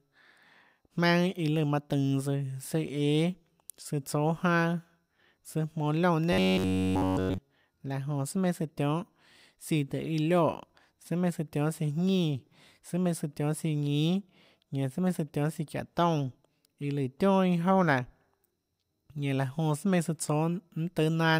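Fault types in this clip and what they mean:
Robotic sound from repeated short buffers: From 6.33 to 7.38 s the speech turns into a stiff, metallic buzz at 93.8 Hz. The whole stretch is affected. This is likely a fragment of about 10.7 ms replayed over and over while fresh audio failed to arrive.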